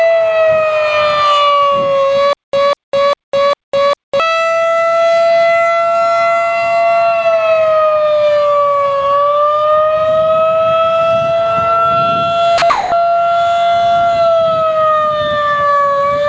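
The audio has passed through a call path whose band stops at 8 kHz, which fits the G.722 codec. From 2.33 to 4.2 s there is a stutter with silent gaps. A fragment of about 0.2 s plays four times at an even 0.4 s pace, with about 0.2 s of digital silence between repeats, and the audio meant for that stretch is lost. The identical repeating burst and the dead-silent gaps set it apart from a plain dropout, and point to a playback or stream stall that likely replayed its last buffer at each retry. Around 12.6 s the sound is dropped by the voice detector twice, for 40 ms at 12.58 s and for 220 ms from 12.70 to 12.92 s. In both cases the sound gives way to steady, featureless noise and then resumes. Unlike the stutter, nothing repeats and the gaps are filled with comfort noise rather than true silence. This is likely the sender's detector mistaking quiet sound for background.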